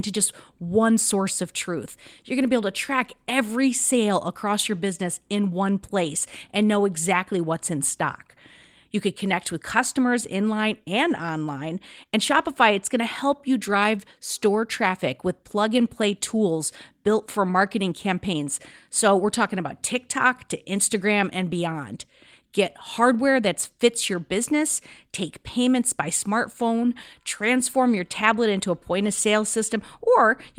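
Listening to this speech recording, nothing stood out as a technical problem anywhere along its length.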